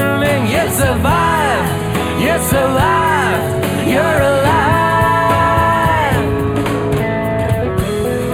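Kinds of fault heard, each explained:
Channel delay (comb filtering): One channel runs late by about a tenth of a millisecond, a few samples, and the two are summed. Shared content cancels at evenly spaced frequencies, the first notch near 5 kHz, so the sound turns hollow throughout.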